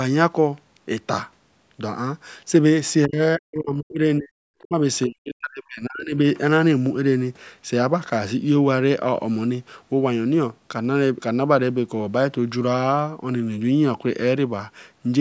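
A speech recording passed through call microphone processing, with nothing above 8 kHz. The speech dips or breaks up at 3.06, 3.37, 4.18, 4.61 and 5.06 s. Each drop lasts from a fraction of a second to about one second and falls by roughly 20 to 40 dB. This is likely speech suppressed in double talk. The echo canceller mistook the talker for loudspeaker echo and turned them down.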